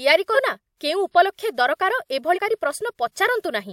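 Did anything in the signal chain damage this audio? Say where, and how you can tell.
Yes, at the codec stage. The speech jumps forward twice: at 0.34 to 0.37 s it loses about 200 ms, and at 2.35 to 2.39 s about 300 ms. This is compressed frames skipped. Whole encoded frames were missing or rejected by the decoder. The skip sizes fit a frame length of about 42.7 ms, which points to roughly five and seven frames lost.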